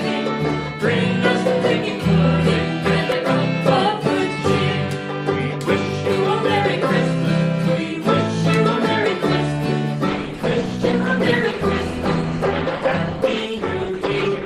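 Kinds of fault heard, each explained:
Adaptive stream at a lower bitrate: the player switched abruptly to a lower-quality rendition at 10.07 s and held it to the end, with no gap. Codec artefacts rise, which fits a drop from about 64 kbit/s Opus to 16 kbit/s.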